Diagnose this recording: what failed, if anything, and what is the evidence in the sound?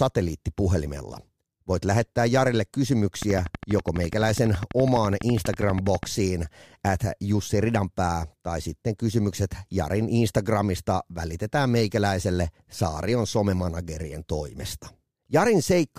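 A train of clicks runs through the speech from 3.22 s to 6.04 s. The pulses arrive at a steady 12.1 per second, about forty in all, each with much the same sharp shape. They stand out about 10 dB above the speech and carry on through the pauses, so they are not part of the talker's sound. The likely stage is the analogue wiring or the interface, where nearby equipment injects a repeating pulse into the signal path.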